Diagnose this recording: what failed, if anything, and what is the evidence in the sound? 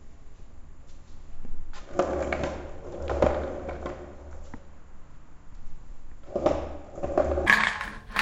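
Wrong sample rate from 7.46 s to the end at 8.22 s, a playback-stage fault: the final stretch runs three times too fast and 19 semitones high. That fits 16 kHz material clocked out at 48 kHz without conversion, shifting speed and pitch together.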